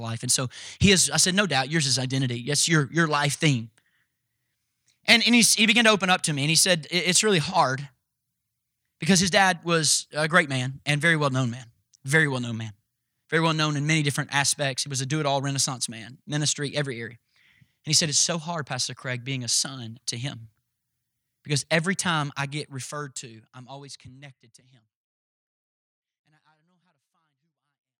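No technical faults are audible.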